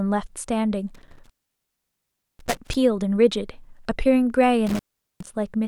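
Intermittent contact breaks the speech at 0.95–2.75 s, with the line open for about 1.1 s, and again at 4.67–5.33 s, open about 0.41 s. A loose connection drops the signal to faint hiss, with crackle at each edge. The waveform shows sudden near-flat gaps, and the spectrogram shows vertical broadband clicks bracketing each gap.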